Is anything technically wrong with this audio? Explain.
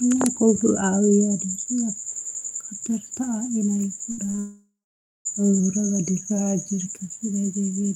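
Yes, there are three faults, all in the second half.

From 4.11 to 4.39 s the speech turns choppy and robotic: repeated packet loss left four gaps, up to 60 ms each, patched by repeating sound.

From 4.39 to 5.27 s the sound smears into a fading buzz, then about 0.55 s of silence follows; this is likely a long network dropout.

From 5.60 to 6.86 s the speech slows by 6.4% and drops about 114 cents, likely a drift correction step.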